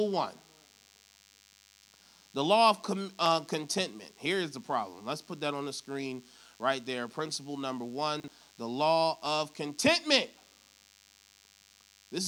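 Under the whole clip there's a thin, steady DECT cordless phone buzz at 100 Hz, sitting roughly 30 dB below the speech. That's a nearby handset or base firing its radio burst every 10 ms and the audio circuitry rectifying it into a harmonic-rich drone.

At 8.2 to 8.28 s, just before "the law of contentment", you get chunks out of order. A 40 ms chunk landed one slot late, so the speech jumps with hard joins. At 11.32 to 11.48 s it happens again, worse: a 40 ms chunk turns up three slots late, so that stretch sounds properly scrambled.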